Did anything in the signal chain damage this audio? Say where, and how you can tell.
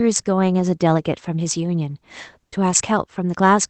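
Yes. There is clock drift between sender and receiver at the jitter buffer, where the sender's clock runs roughly 4 percent fast. Excess samples pile up throughout the clip, forcing the receiver to keep trimming audio. On a waveform, syllable spacing looks subtly compressed and unevenly jerky.

The repeated timing corrections run from 0.26 s to 3.51 s, and the sound plays at about 105 percent speed, with small hiccups at irregular intervals. A spectrogram shows tiny discontinuities where short segments were cut, all shortening the audio, across the Opus call path's band up to 8 kHz.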